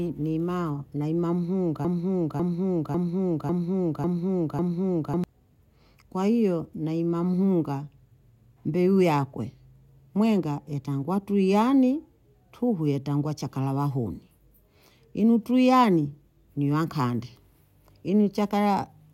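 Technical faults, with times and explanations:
1.85–5.24 s, broken-record loop: a 0.55 s piece of the speech plays six times back to back with no change, so you get that stuck, stuttering repeat instead of the talk moving forward. It sounds mechanical because each pass is an identical copy. The most likely cause is the player or stream stalling and re-sending the last fragment it held. Whatever should have been said in those few seconds is gone.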